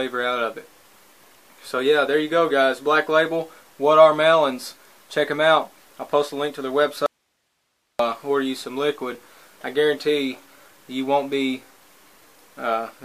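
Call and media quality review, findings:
Audio dropout to a faint residue, 7.06–7.99 s: signal cuts abruptly for about 0.93 s, leaving only hiss roughly 50 dB below programme level, then returns mid-flow. Likely upstream source interruption; downstream path stayed live, passing its own noise floor.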